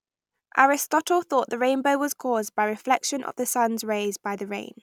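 Nothing stood out as a technical problem anywhere in the speech recording on listening.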